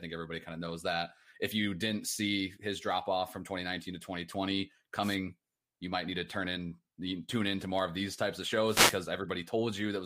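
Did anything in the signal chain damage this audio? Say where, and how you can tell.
Yes: brief static swishes at 5.01 to 5.17 s and 8.65 to 9.01 s, after "of these types of", are wireless microphone noise hits, from the radio link fading.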